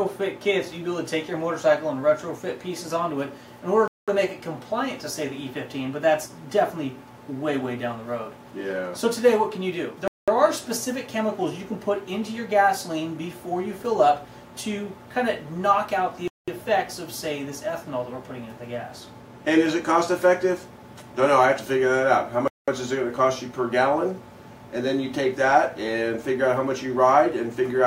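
The audio drops out into silence four times, at 3.88 to 4.08 s, 10.08 to 10.28 s, 16.28 to 16.48 s and 22.48 to 22.68 s, each hole lasting 200 ms and recurring every 6.2 s. This is a gap between chunks: the sound arrives in 6-second pieces, and silence is inserted at each join. Nothing is missing, but the flow is interrupted at every boundary.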